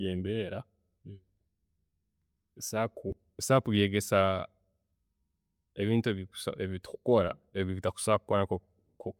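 No technical faults are audible.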